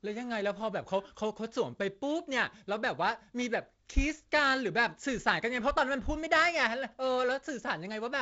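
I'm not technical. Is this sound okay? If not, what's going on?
Yes, no faults here.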